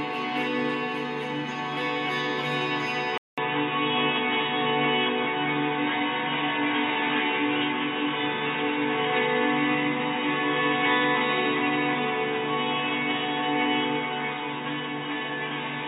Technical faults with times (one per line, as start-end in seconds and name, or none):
3.18-15.87 input switched to a poorer device